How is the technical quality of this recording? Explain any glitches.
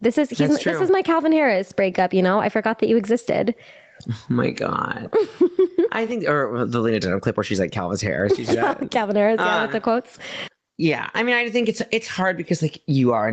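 The main problem here is gain pumping, and it runs through the whole recording. The top end stops at about 8 kHz, which is what you'd expect from a call path with an Opus-style codec, so that's just the channel.

Gain pumping: the level keeps breathing, with a swing of something like 15 dB. The likely cause is the mic gain set way too hot, with a fast limiter or compressor clamping down on each loud burst and then releasing. The result sounds squashed, with loud and quiet parts pushed close together.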